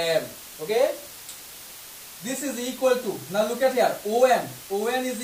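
Throughout, low bit depth with dither, about 6 bits, leaves a steady, even hiss only roughly 15 dB below the sound, appearing as a flat full-band noise floor on a spectrogram.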